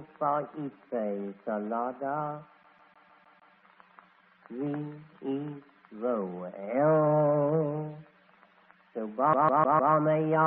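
A scratch makes the laser jump back one track on each turn, producing a CD stuck on one turn from 2.63 to 3.55 s and again from 9.33 to 9.94 s. Each time, the same 0.15 s slice plays again, six times in the first event and four in the second, with a brief mute at every jump. The result is a fast, even, mechanical stutter, heard through the call codec's band limit of about 8 kHz.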